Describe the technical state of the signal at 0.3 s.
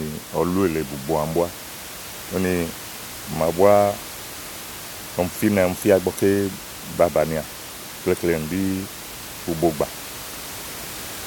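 At 0.3 s the signal is intact, with only the room's own background noise audible, sitting about 14 dB below the speech as part of the recording itself.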